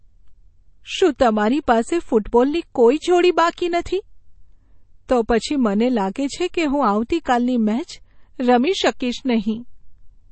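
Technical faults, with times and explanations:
Throughout, MP3 compression: nothing is heard above 8.4 kHz, and plainly audible codec damage runs through the speech. This is likely low-bitrate MP3 coding, which fits about 32 kbps, where the encoder drops weak frequency lines from frame to frame and cuts the treble.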